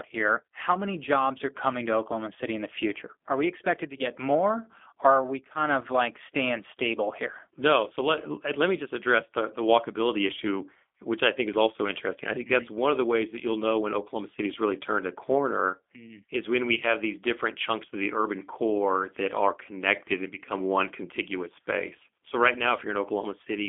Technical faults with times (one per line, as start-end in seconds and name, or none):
0.00-23.68 G.729 codec